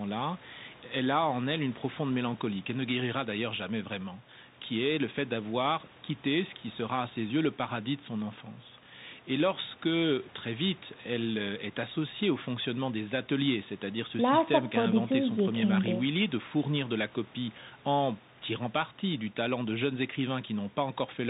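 From start to finish it's the Bluetooth CVSD headset codec: nothing above 4 kHz, scratchy s sounds, granular hiss underneath, consistent with a 64 kbps CVSD link.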